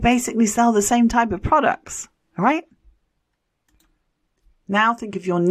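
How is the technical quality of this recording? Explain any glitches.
No glitches can be heard in this recording, and its technical quality is sound throughout.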